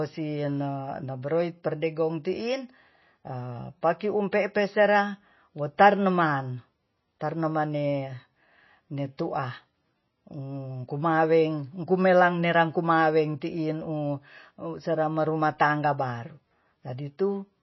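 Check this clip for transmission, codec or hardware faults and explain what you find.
There's one codec problem, present throughout. The speech has nothing above about 5.8 kHz and plainly audible swirly, watery artefacts, most likely MP3 compression starved of bits, which fits a bitrate around 24 kbps.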